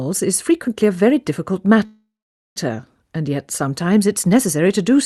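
A call audio freeze runs from 1.85 to 2.58 s. The sound stops moving forward and the last fragment is stretched into a fading buzz, then about 480 ms of silence, before the audio resumes exactly where it left off, so nothing is lost but everything after it arrives about 0.7 s late. On a spectrogram this shows as smeared, flat horizontal bands decaying into an empty column; the waveform shows a smooth taper to a flat line. The likely cause is packets delayed in transit until the call's jitter buffer ran dry, with the receiver filling the wait. Throughout, the spectrogram's content stops near 12 kHz, consistent with the call codec's bandwidth limit.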